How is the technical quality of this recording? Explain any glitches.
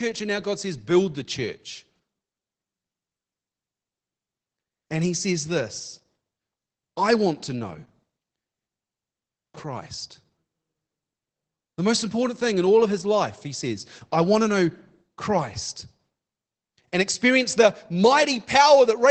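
The quality is held back by plainly audible Opus voice compression for the whole 19 seconds of speech. It sounds like Opus in its SILK linear-prediction mode at a low rate, roughly 12 kbps. Everything above 8 kHz is gone, so the speech is muffled, and the coarsely coded excitation makes it a bit hoarse and faintly robotic.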